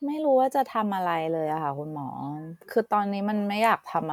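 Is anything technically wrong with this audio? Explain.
No, nothing technically wrong turns up anywhere in this speech recording.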